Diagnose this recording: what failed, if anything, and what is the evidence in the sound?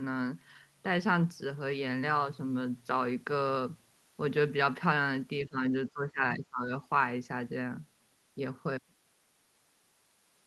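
The speech sinks twice, first from 5.45 to 5.62 s by about 15 dB, then more deeply from 5.89 to 6.71 s by about 20 dB. This points to the call-processing stage, likely speech suppressed in double talk: with both parties talking together, the echo canceller could not tell this talker from returning loudspeaker echo and attenuated the whole send path.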